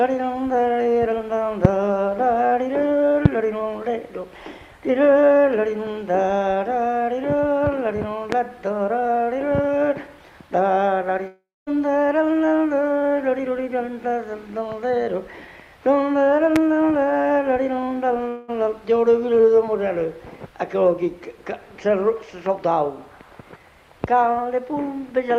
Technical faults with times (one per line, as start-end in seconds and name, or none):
1.65-1.67 loud pop
3.25-3.28 loud pop
8.32-8.35 loud pop
11.27-11.68 long network dropout
16.56-16.58 loud pop
18.28-18.50 long network dropout